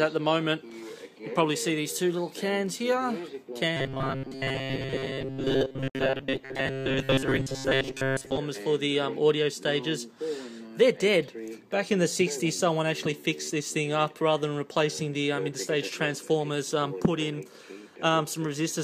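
From 3.77 to 8.38 s, robotic sound from repeated short buffers gives a rigid 134 Hz metallic buzz, likely from about 7.5 ms segments looping while most new audio is skipped.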